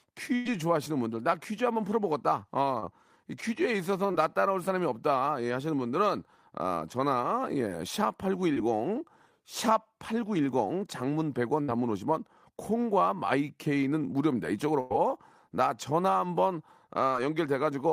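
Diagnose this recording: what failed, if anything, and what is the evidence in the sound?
The network dropped a burst of packets at 0.35 to 0.57 s, 11.62 to 11.70 s and 14.80 to 14.92 s, with roughly 100 ms, 60 ms and 100 ms missing. The decoder stretches and fades the last sound across each gap, then resumes with that audio gone.

Short concealed packet loss, also in the network path, appears at 2.80 to 2.84 s, 4.12 to 4.16 s, 8.54 to 8.58 s and 17.10 to 17.14 s. About 20 ms is lost each time. The receiver extrapolates the preceding sound and crossfades back, leaving brief smears or wobbles.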